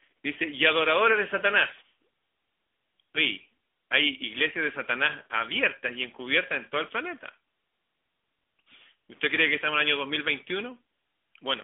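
From start to finish, the speech carries the sound of an AMR narrowband mobile codec. The codec models the voice as a vocal-tract filter fed by sparse pulses, frame by frame. The damage is plainly audible. The voice has a buzzy, synthetic edge, which fits a mid-range AMR-NB rate near 10 kbps. The band is squeezed to roughly 250 Hz to 3.5 kHz. Nothing passes above 3.7 kHz, so sibilants sound dull and lows thin.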